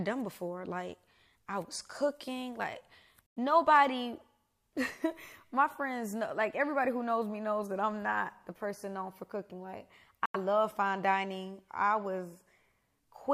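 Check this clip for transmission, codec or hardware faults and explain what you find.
Two brief dropouts interrupt the speech. Bluetooth stall, at 3.26 to 3.38 s and again at 10.26 to 10.36 s: the audio cuts to silence for 102 ms and then 88 ms before resuming. The likely cause is radio interference delaying packets on the wireless link, so the headphones' small playback buffer emptied and output paused until retransmitted data arrived. Each gap is a clean hole in the speech.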